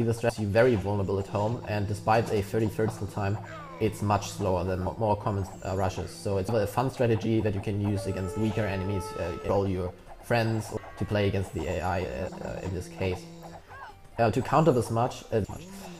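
Compressed frames skipped: whole blocks of the compressed stream never reached playback, so the audio jumps ahead at 0.29, 2.88, 4.86, 6.48, 9.49, 10.77, 12.28 and 15.44 s. It loses roughly 0.2 to 0.7 s each time, in steps fitting a 26.1 ms frame, and each join is a short smeared blip.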